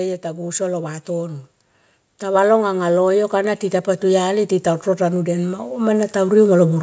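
A speech recording where, from 2.2 s to 6.78 s, you can hear automatic gain rising: the AGC decided the input was too quiet and ramped its gain up by about 10 dB, so the voice and the background swell together rather than the talker getting louder.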